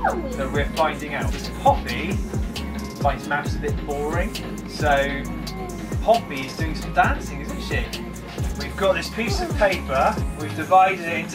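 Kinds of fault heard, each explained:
No technical fault can be heard at any point, and the signal keeps unbroken continuity.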